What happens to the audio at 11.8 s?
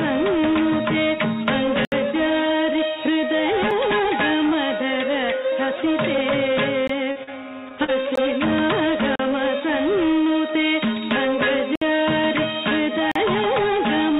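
At 11.76 s the sound drops into a block of digital silence lasting 60 ms, to 11.82 s. A stretch of output samples went out as zeros, likely because the buffer wasn't filled in time, so the audio cuts out and back abruptly, leaving a short hole.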